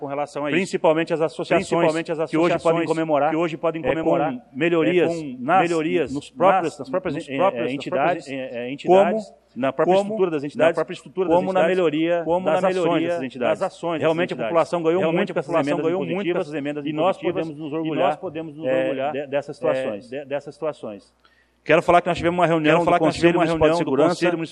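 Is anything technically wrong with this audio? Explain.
Yes. A doubled audio track runs throughout: a second full-band copy of the whole sound trails the original by about a second, only about 5 dB quieter, with no decay or room colour. Unlike an echo, it never fades away. It is likely caused by a slower second capture path mixed back in.

DAB burbling appears at 3.88 to 4.04 s and 6.66 to 6.77 s. Bit errors slipped past error correction into the MP2 data, putting short blips of noise in single sub-bands. The result is short blips rather than the clean gaps of dropouts.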